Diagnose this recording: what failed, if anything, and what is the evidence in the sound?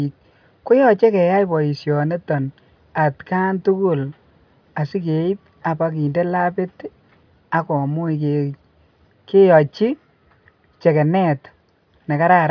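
Nothing in the recording points to a failure at any stage of the chain. The speech carries no audible event that would implicate the wiring, conversion, buffering, processing, transport, storage or playback.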